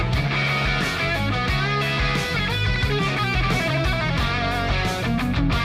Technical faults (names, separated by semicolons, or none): loud pop